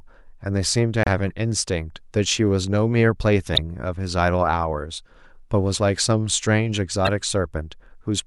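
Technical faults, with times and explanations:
1.03–1.07 s, 3.55–3.58 s and 7.05–7.09 s: damaged data in a compressed stream. Each of these brief bursts lasts about 40 ms and breaks into the speech as a harsh blip. At these points the compressed data carrying the sound is corrupt, so the decoder cannot interpret those frames properly. It outputs garbled material or drops out until it locks back on to a valid frame boundary, and then normal playback resumes.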